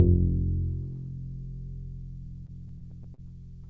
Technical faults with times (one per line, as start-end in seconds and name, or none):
2.46-3.20 repeated stalls (stutter)